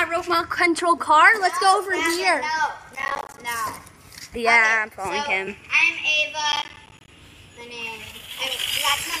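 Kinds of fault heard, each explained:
Processor overload crackle: the processor repeatedly missed its deadlines on short buffers, roughly 10 ms each, and each miss left a hard-edged gap of silence, so from 2.95 to 3.38 s and 6.52 to 7.08 s the sound breaks into a gritty, tearing crackle.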